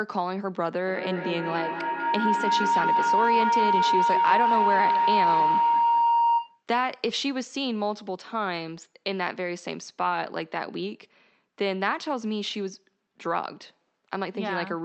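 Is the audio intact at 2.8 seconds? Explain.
No. At 2.8 seconds the speech is inside a feedback howl that runs from 0.87 to 6.63 s. Sound from a loudspeaker is re-entering a microphone on the same call, and each pass around that loop comes back louder rather than quieter, narrowing to the frequency the loop favours. The result is a sustained tone near 1 kHz, pulsing about every fifth of a second and peaking about 5 dB above the speech.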